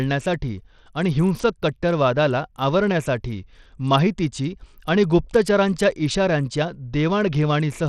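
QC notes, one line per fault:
Throughout, Bluetooth SBC compression: the treble on this speech is thin and keeps flickering in and out, with a gritty, grainy noise sitting on the sound and some rough aliasing up top. That's likely SBC at a starved bit pool, something around 80 kbps by the sound of it. The top sub-bands get few or no bits, so the highs drop out, and the remaining bands are quantised so coarsely that the grit and aliasing come through plainly.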